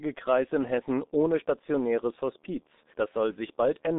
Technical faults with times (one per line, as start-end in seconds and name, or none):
0.00-3.98 G.723.1 codec